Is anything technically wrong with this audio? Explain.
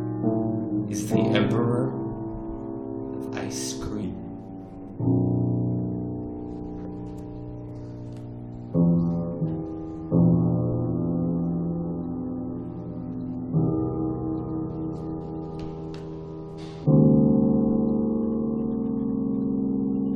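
Yes. From 4.03 s to the end, the section plays at the wrong speed, running at 0.855 times its original rate, likely from playback or editing locked to the wrong clock. Everything turns slower and deeper, about three semitones down. On a spectrogram, every harmonic sits lower and stretches wider in time from that point.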